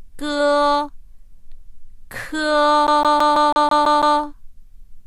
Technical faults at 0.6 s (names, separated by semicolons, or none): none